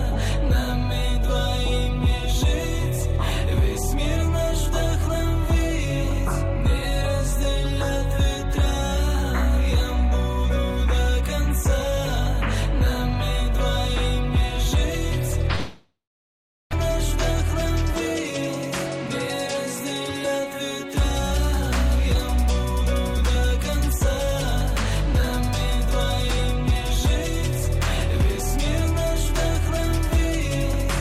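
At 15.55 s the sound trails into a fading buzz, then about 0.75 s of silence until it picks up at 16.75 s with roughly a second gone. That's likely a long network dropout, and the delay shifts by around 150 ms afterward.

From 19.08 to 21.01 s there's a jitter buffer speed-up. The receiver trims tiny pitch-period slices to drain the backlog, about 70 ms in all, so playback runs at 104% speed with unchanged pitch.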